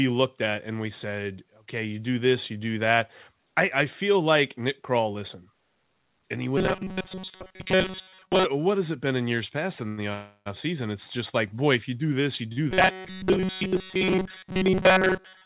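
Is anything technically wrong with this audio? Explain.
Yes, there are three kinds of fault, all heard through a G.711-style call path whose band stops at 4 kHz.

Robotic sound from repeated short buffers, 6.58 to 8.45 s (after "and he", before "what has it been") and from 12.71 s to the end: the likely cause is that audio arrived too seldom, so a segment about 5.3 ms long was replayed in place of most of the real signal. That imposes a rigid, metallic 188 Hz buzz that only loosely tracks the speech.

Short stall from a late packet, at 9.88 s (after "in years past in") and 12.52 s (after "you do this you"): a packet missed its slot and the jitter buffer emptied. The last sound was stretched by 94 ms and 43 ms, so nothing is lost, but syllables hang too long.

Call audio freeze, 10.13 to 10.48 s: the jitter buffer ran dry for longer, likely from packets delayed in transit. About 323 ms of extended, fading sound fills the wait, including roughly 30 ms of near-silence. 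The speech then resumes where it stopped, adding a gap without losing content.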